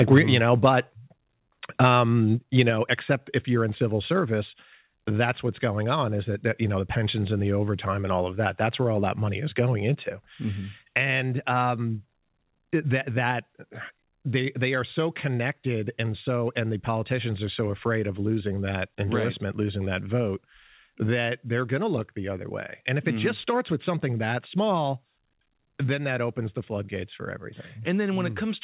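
Right at the start, from 0.01 to 0.19 s, there's microphone overload: the peaks get squared off and a few percent of samples are flattened, giving a gritty, crackly edge to the loudest bits. It's most likely an input gain set too hot, pushing about 4 dB past full scale.

Then comes a microphone volume stepped down, three times: at 0.18 s by about 3 dB, at 2.7 s by about 4 dB, and at 4.2 s by about 1 dB. Sound and background drop together in one abrupt step each time, most likely the call software pulling the input gain down. The whole thing sits in a band that stops at 4 kHz, which fits a narrowband telephone codec.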